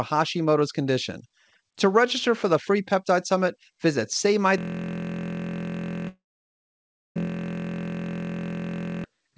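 At 4.58 s the speech locks into a steady buzz at about 43.1 Hz that runs until 9.04 s. It is a system hang loop: the host froze while the sound hardware kept replaying one 23.22 ms stretch of its ring buffer, which fits a 1024-sample buffer, about 192 times over.

From 6.08 to 7.17 s, inside that buzz, the sound trails off and then goes silent for nearly a second. This is likely a long network dropout. No packets arrived, so the receiver briefly extended the last sound before falling quiet, and that portion of the audio never returns.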